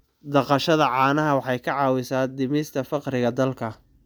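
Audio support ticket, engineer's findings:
Reviewed the full speech capture and found no audible faults attributable to the playback or capture chain; no component action required.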